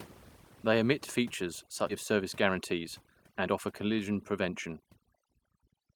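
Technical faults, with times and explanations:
Throughout, overdone noise removal: aggressive suppression pulls frequency bands near the noise estimate down to nothing, leaving near-silent background with twinkling specks.
1.89 s, skip ahead: about 0.7 s of speech is dropped while later audio was already waiting, so playback jumps forward and joins both sides with no gap.
2.11 to 3.85 s, jitter buffer speed-up: the receiver trims short pitch-period pieces repeatedly to shrink excess buffered delay, running speech about 6 percent fast at unchanged pitch, sounding hurried.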